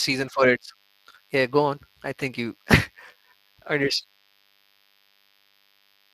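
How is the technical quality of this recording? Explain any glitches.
The recording has two faults that run through the whole speech clip: a faint, thin buzz and clearly audible codec damage.

DECT cordless phone buzz is present from start to finish. A nearby DECT handset or base transmits a burst every 10 ms, and the audio circuitry rectifies it into a thin, steady 100 Hz buzz with many harmonics, sitting roughly 35 dB below the speech. Its buzzy, harmonic-rich edge and 100 Hz rate set it apart from smooth 50 or 60 Hz mains hum.

Speex codec damage also covers the entire clip. This CELP speech coder has too few bits for the excitation here, which fits a mid-rate setting around 22 kbps, so the speech sounds noisy and hoarse. Above 8 kHz there is only a shaped, noise-like fill, and nothing at all above 15.2 kHz. That grainy fill distinguishes it from plain low-pass filtering.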